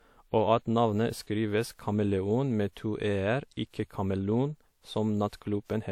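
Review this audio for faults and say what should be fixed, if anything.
Low-bitrate audio saved at a high bitrate runs through the whole clip. The speech carries the coarse, smeared detail of heavy lossy coding, and nothing is present above 19.2 kHz, even though the file sits at a generous MP3 rate. The likely cause is an earlier low-rate encode, which fits a 64 kbit/s WMA source, later re-saved as high-rate MP3. The second encoder faithfully preserved damage it could not undo. Unlike a plain low-bitrate file, the file's bitrate here says nothing about the sound, which is why the damage shows by listening or in the spectrum. To prevent it, encode once from the original lossless recording rather than transcoding an existing lossy file.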